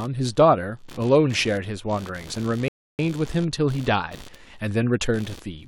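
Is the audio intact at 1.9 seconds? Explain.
No. At 1.9 seconds, as throughout the clip, computer activity noise is present: processor and peripheral load changes disturb the shared audio ground, adding a buzzy chirping at around 70 pulses per second, roughly 25 dB below the speech, seen as faint evenly spaced vertical striations on a spectrogram.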